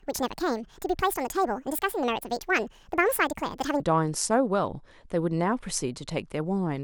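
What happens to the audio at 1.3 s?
Most likely the opening stretch, from 0 to 3.80 s, was played back against the wrong clock, giving a section at the wrong speed at 1.69 times normal. Speed and pitch rise together, so at 1.3 s the speech sounds hurried and roughly ten semitones too high.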